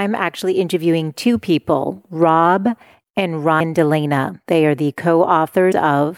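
At 3.57 s the speech is briefly disrupted until 3.61 s. This is damaged data in a compressed stream. Some bytes in the encoded file are wrong, so the decoder misreads those frames and loses sync. It then hunts for the next valid frame header before clean speech returns. The same fault recurs from 5.68 to 5.73 s. Each burst lasts about 44 ms.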